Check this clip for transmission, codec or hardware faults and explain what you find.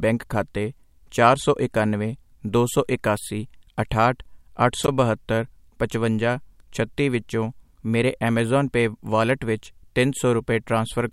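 A wireless microphone squelch dropout occurs from 4.82 to 4.88 s. The analogue FM radio link fades, so the receiver's squelch mutes its output. There is a brief rise of hiss, then a hole of near silence lasting 18 ms before the speech returns.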